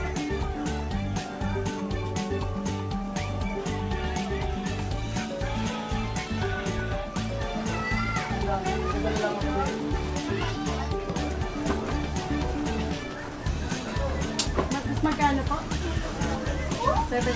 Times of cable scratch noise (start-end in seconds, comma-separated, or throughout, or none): none